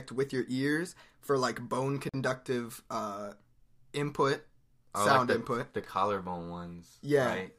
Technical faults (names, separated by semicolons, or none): Bluetooth stall